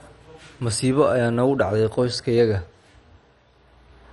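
Throughout, likely MP2 compression near 48 kbps starves the upper sub-bands: nothing remains above 11.3 kHz, and the speech sounds dull, gurgling and granular.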